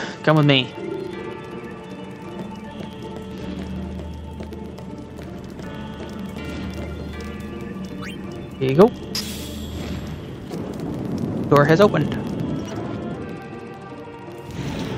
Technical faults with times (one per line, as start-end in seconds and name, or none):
0.11-14.89 periodic USB or driver dropouts